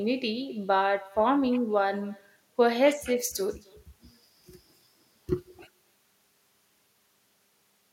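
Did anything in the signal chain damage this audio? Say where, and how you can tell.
Yes. Throughout the speech, every phrase is followed by a faint, thin repeat, about 24 dB below the talker and trailing by roughly a third of a second. That is echo with no canceller, a call-processing fault: the far end plays the call through a loudspeaker, its microphone picks it up again, and with no echo canceller to subtract it, the network round trip sends the talker's own voice back.

From 3.17 s to 6.73 s the speech turns abruptly thin, bright and hissy, with the sibilants pushed forward. That points to pre-emphasis left on, at the recording or transmission stage. The section matches the standard FM 50 µs boost curve, lifting 10 kHz about 11 dB relative to 1 kHz. The treble lift applied before transmission was never undone by the matching de-emphasis cut on this stretch, so the high end stays exaggerated until the section ends.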